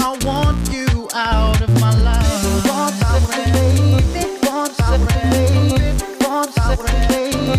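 No technical faults can be heard anywhere in the recording; the signal holds steady and intact throughout.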